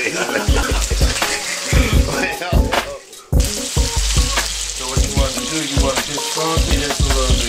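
Three times the recording software most likely fell behind and failed to read its samples before the hardware reused the buffer, a dropped buffer (overrun), so a stretch of audio was discarded and the surrounding sound was spliced straight together. At 0.63 s roughly 70 ms goes missing, at 1.44 s about 50 ms, and at 6.71 s again around 70 ms. None of these leaves a gap of silence; instead the sound jumps abruptly forward at each point.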